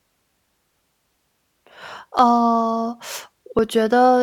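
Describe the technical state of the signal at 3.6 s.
At 3.59 s the speech jumps abruptly where two non-adjacent stretches of waveform meet, with no gap of silence between them. This is likely a dropped buffer (overrun): the capture software did not read a block of samples before the hardware overwrote it, so that block was lost and the audio on either side was spliced directly together. The missing portion is only a few milliseconds, so the skip is very short.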